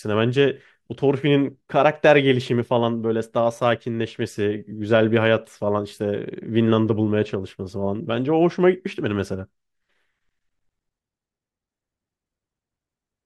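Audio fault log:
None: no fault can be heard anywhere in this speech clip. Nothing in the recording calls for an entry in this log.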